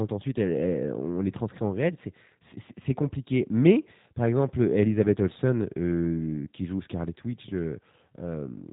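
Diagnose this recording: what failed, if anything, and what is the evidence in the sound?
The fault sits at the codec stage: the speech has passed through the G.729 codec throughout. Nothing reaches above about 3.8 kHz, so sibilants lose their edge, and the plainly audible roughness and slightly synthetic buzz fit a low-rate, roughly 8 kbit/s coder that rebuilds the voice from a filter, a pitch predictor and a few pulses per frame. A spectrogram shows a hard ceiling near 3.8 kHz for the whole clip and smeared, grainy harmonics below it.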